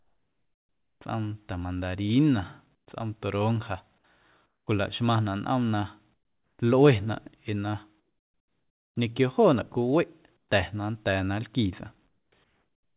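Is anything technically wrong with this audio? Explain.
Yes. In several pauses in the speech, the background drops out and is replaced by a flat, smooth hiss that is about 8 to 14 dB quieter, with no texture or small events left in it. This comfort noise in place of the background occurs at 0.0 to 1.01 s, 2.75 to 2.87 s, 4.46 to 4.67 s, 6.14 to 6.59 s, 8.0 to 8.96 s, 10.37 to 10.49 s, 12.08 to 12.32 s, and from 12.44 s to the end. The likely cause is discontinuous transmission. When the sender's voice detector hears no speech, it stops sending audio, and the receiver fills the gap with synthetic noise shaped to match the background. The real ambience returns each time speech resumes. The call codec itself cuts off everything above 4 kHz, which fits G.711 telephone-band coding.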